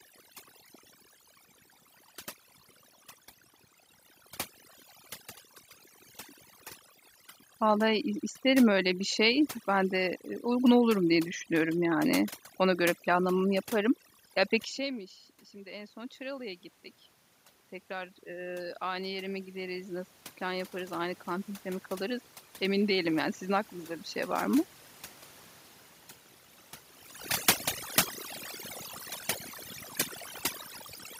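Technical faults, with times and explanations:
throughout, overdone noise removal: The background drops and breaks up into twinkling specks. The noise reduction is set too strong for the room noise, pushing single frequency bands down or off when they sit near its noise estimate, and quiet parts of the voice go with them.
14.76–16.59 s and 18.24–23.71 s, automatic gain rising: Voice and background swell together, first by about 5 dB over nearly 2 s, then by about 10 dB over about 5.5 s. After the talker moved away from the microphone at roughly 14.5 s, the input dropped by about 19 dB, and the automatic gain control raised its gain gradually to compensate.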